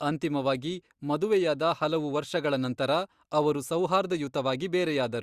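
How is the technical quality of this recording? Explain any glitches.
Nothing to report: no audible glitches or technical faults anywhere in the recording.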